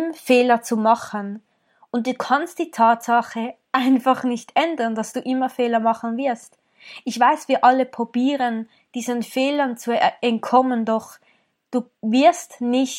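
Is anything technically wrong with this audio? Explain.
No, nothing technically wrong can be heard in this recording.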